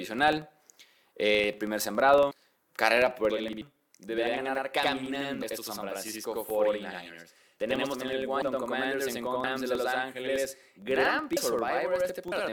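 From the start, a steady buzz of about 21.5 Hz follows the speech level. This is a filter restarted on every block: each block begins from silence with a small transient, and the rate fits a 2048-sample block.

At 2.30 s the speech jumps ahead by roughly a third of a second. This is compressed frames skipped: the decoder lost several 23.2 ms frames.

From 3.31 s to the end, a channel delay causes doubling. One channel runs 85.33 ms late, which fits a 4096-sample buffer, and in the mono sum that copy is heard as a slap echo at equal level.

The same skipped-frame jumps recur at 3.60, 5.41, 8.41, 9.43, 11.36 and 12.31 s. They drop between about 0.15 s and about half a second, and the longest gap is at 9.43 s.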